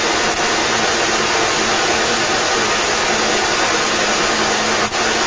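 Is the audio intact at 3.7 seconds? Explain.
No. At 3.7 s the echo leak running through the whole clip, 0 to 5.27 s, is present: a distinct copy of the speech trails about 0.34 s behind and sits around 10 dB above it. It is likely a far-end loudspeaker echo the canceller missed. Its discrete, delayed repeat separates it from smooth room reverberation.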